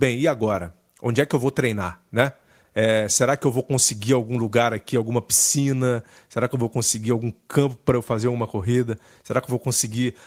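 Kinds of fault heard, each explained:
No technical fault can be heard anywhere in the speech, and the signal stays continuous and steady throughout.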